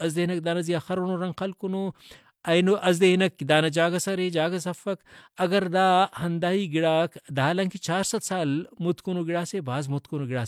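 No technical faults can be heard anywhere in the speech recording, and the signal holds steady for its whole duration.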